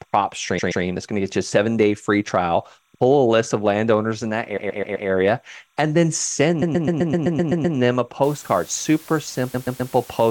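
Linear timecode from a neighbouring track or cable leaks into the audio throughout. The code is a square wave flipping between pitches near 1 and 2 kHz, giving a steady chirping warble roughly 45 dB below the speech, with a rhythm that fits 29.97 frames-per-second code.

Repeated frames occur where a run of compressed frames was delivered again, so the decoder replays the same 128 ms block, stuttering. From 0.58 to 0.83 s it plays twice more, adding 256 ms. From 4.56 to 5.08 s, after "of landowners in that", it repeats four more times, adding 512 ms. From 6.61 to 7.76 s, between "and then" and "them a", nine extra plays add 1152 ms.

From 8.23 s to the end, after "them a", low bit depth with dither sets in. The signal appears squeezed to about 7 bits with dither added before rounding, so the rounding error turns into an even, constant hiss about 25 dB below the speech, without distortion.

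Inside that stretch, repeated frames return from 9.54 to 9.92 s, replaying the 128 ms block three more times and adding 384 ms.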